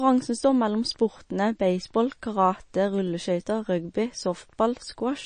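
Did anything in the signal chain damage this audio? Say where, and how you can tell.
Yes, at the codec stage, throughout the speech. Nothing is heard above 9.4 kHz, and codec damage is plainly audible for the whole clip. This is likely MP3 compression at a low bitrate, around 32 kbps, where starved bands are zeroed and the treble is cut.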